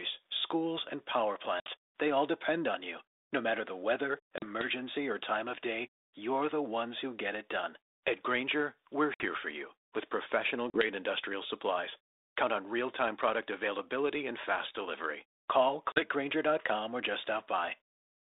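Packet loss on an ADPCM call breaks the speech at 1.6 s, at 4.38 s after "matter the weather", at 9.14 s before "for you with professional", at 10.7 s before "industrial supplies", and at 15.92 s. Each 40 to 60 ms gap, roughly two or three packets, is filled with silence and has hard edges. With those packets gone, the decoder's predictor and step size no longer track the sender's, so the speech comes back slightly distorted, and this clears within tens of milliseconds. Under all of this is the light, band-limited graininess of G.726 ADPCM, consistent with 32 kbit/s.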